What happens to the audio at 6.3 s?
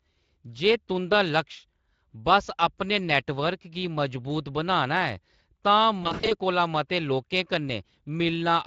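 At 6.3 s the speech is in a stretch of VoIP packet loss concealed by the speech codec, from 6.03 to 6.35 s, just before "कोला मते". About 180 ms of audio went missing in short gaps over roughly 280 ms. The longest gap is 60 ms. The decoder fills each gap from its last pitch and filter, at falling gain. The sound is stretched into a buzzy tone or coloured noise that fades, and it stays weak or distorted briefly after the gaps end.

The same moment also carries Speex codec damage, as the whole clip does. The coding here is plainly audible. Any band above 8 kHz is only a shaped noise fill.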